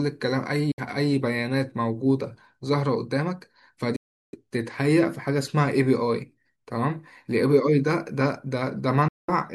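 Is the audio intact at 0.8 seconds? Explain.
No. From 0.71 to 0.81 s the speech cuts to silence, likely a Bluetooth dropout from late packets; it resumes further along, having skipped about 61 ms rather than pausing.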